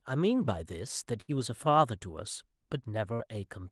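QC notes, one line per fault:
1.21–1.31 s and 3.14–3.22 s, burst of packet loss: at each point the speech doesn't drop to silence. The last sound is carried on and faded, for about 65 ms in the first case and about 52 ms in the second. It then resumes further along with roughly 60 ms of speech missing. This held, fading tail followed by a skip sets it apart from a clean dropout or an edit splice, and it sits over a call-codec band limit near 12 kHz.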